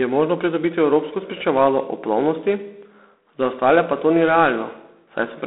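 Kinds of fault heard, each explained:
G.726 ADPCM: the speech is coded as coarse differences from an adaptive prediction. The harsh, rasping hiss that rises and falls with the speech level points to 24 kbit/s coding. The line band runs roughly 250 Hz to 3.5 kHz, with nothing above 3.9 kHz.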